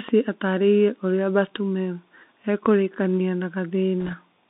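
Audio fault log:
throughout: Bluetooth CVSD headset codec. The speech passes through only a narrow telephone band, roughly 200 Hz to 3.7 kHz, with nothing above 4 kHz, which fits a 64 kbps CVSD headset stream. CVSD codes each sample as a single up-or-down step whose size adapts. When loud high-frequency sound changes faster than the step can follow, the coder falls behind and distorts, so s sounds turn scratchy and a granular hiss sits under the speech. The damage is plainly audible.
4.02 to 4.15 s: bit errors on a Bluetooth voice link. For about 0.13 s, flipped bits hit the CVSD stream at a low rate, somewhere around one or two percent. Each CVSD bit moves the waveform by only one small step, and a wrong bit's effect fades quickly. As a result, the errors sound like a brief rushing, crackly noise over the speech rather than sharp clicks.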